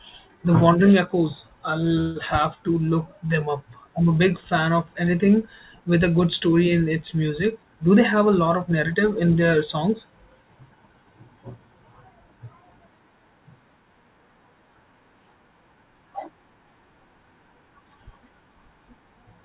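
At 2.01 s a call audio freeze runs to 2.18 s: the last sound is stretched into a fading buzz or hiss for about 147 ms, likely because delayed packets emptied the jitter buffer. The speech then resumes intact, now running about 147 ms later, with nothing lost and no band above 4 kHz.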